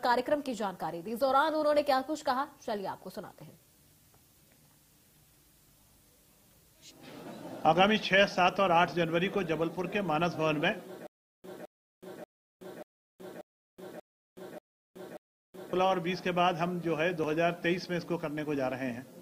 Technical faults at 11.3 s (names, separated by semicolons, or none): stutter with silent gaps